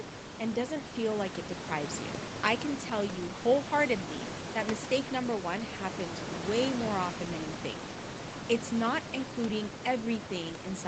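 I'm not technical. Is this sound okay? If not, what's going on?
Yes, nothing is wrong: this is speech carried over an ordinary internet call, so the top end stops at 8 kHz, and the room background sits well below the speech, all as expected for that kind of line.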